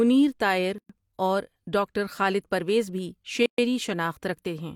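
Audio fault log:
0.78 to 0.90 s and 3.46 to 3.58 s, gap at a join of encoded pieces: the speech drops into dead silence for about 112 ms just before "اور ڈاکٹر خالد پرویز", and again for about 124 ms just after "ڈاکٹر خالد پرویز بھی". Each hole has smeared edges, and the speech then resumes where it stopped. Separately encoded pieces were joined without trimming, so each piece's encoder start-up delay and final-frame padding stayed in as silence.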